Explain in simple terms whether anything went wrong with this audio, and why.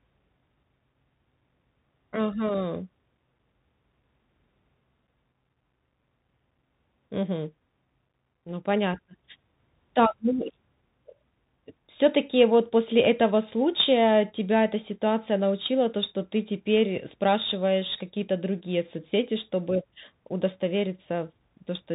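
Yes, it went through a Bluetooth CVSD headset codec for the whole clip. That squeezes the speech into a narrow phone band, with nothing above about 3.8 kHz. It tracks the waveform with tiny up-or-down steps, so s sounds turn scratchy and a grainy hiss sits underneath.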